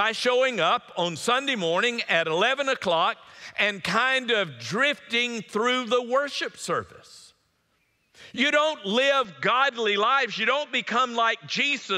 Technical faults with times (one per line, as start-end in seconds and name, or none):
9.25-11.98 input switched to a poorer device